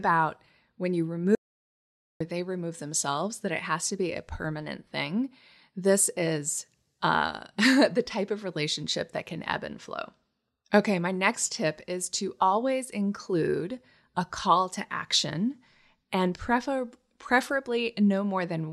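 In this speech clip, the sound cuts off abruptly at 1.35 s and returns mid-flow at 2.20 s, leaving about 0.85 s of dead silence with no room tone. This is an audio dropout to silence, likely from a disconnected device, failed link or stray mute while recording continued.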